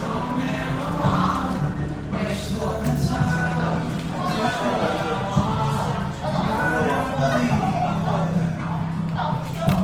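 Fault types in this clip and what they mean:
Opus compression: The whole clip sounds plainly rough and grainy. Tonal parts turn noisy rather than swirling. The likely cause is the Opus music mode, at a bitrate that fits 16 kbps. Band energy survives, but fine detail is noise-filled. Content reaches 20.2 kHz.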